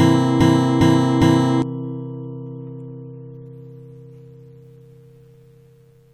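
A recording of sounds opens with a broken-record loop already under way at 0.00 s: a 0.41 s fragment repeats exactly, back to back, three times until 1.62 s, and whatever should have played there is gone. The likely cause is a stalled player, encoder or stream resending its last buffered piece. On a spectrogram it appears as identical blocks tiled every 0.41 s; the waveform shows the same shape copied end to end.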